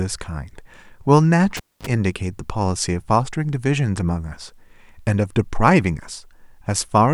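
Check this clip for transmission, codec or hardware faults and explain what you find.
One hardware fault is present. From 1.57 to 1.87 s a cable is pulled and plugged in. A pop opens about 250 ms of near silence. As the plug reseats, its tip alone touches, giving 37 ms of 50 Hz mains buzz. A second pop restores the speech.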